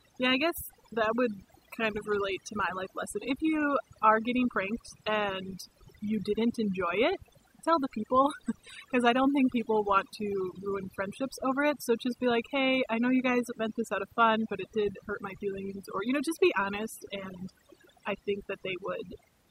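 Overdone noise removal runs through the whole speech clip. A noise reduction stage was set too aggressive. It pushes frequency bands near its noise estimate down or out entirely. Quiet parts of the voice vanish with them. Pauses fall to near silence with twinkling specks.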